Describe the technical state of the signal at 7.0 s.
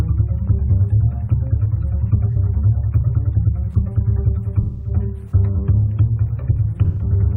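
At 7.0 s the signal is inside an AAC frame loss with concealment, running from 6.84 to 7.03 s. About 128 ms of coded audio went missing, which fits roughly three lost frames, and the decoder bridged the gap by reusing the last good spectrum with altered phase and energy. The result is a smeared, noisy or phasey patch rather than a hard gap, which separates it from a plain dropout to silence or a sharp click.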